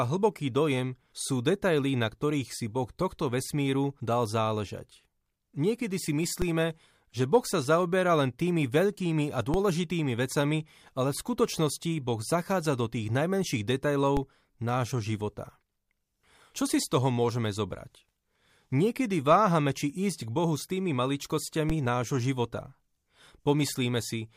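At 6.42, 9.54, 14.17 and 21.70 s, a DC step shifts the waveform's zero line by about -17 dBFS, then drains away through a 20 Hz high-pass. Each one is a brief low thump under unchanged speech. The waveform jumps and curves back, and the spectrogram shows a thin broadband line with low-frequency energy.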